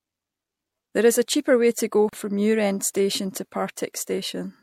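Separately encoded pieces were joined without trimming, so the encoder's start-up delay and the padding on the final frame of the earlier piece both stayed in at the seam: a gap at a join of encoded pieces. At 2.09 to 2.13 s, right after "cheaper way to go", the speech drops out for about 37 ms. The silence has smeared edges, and the speech resumes exactly where it stopped, with nothing lost.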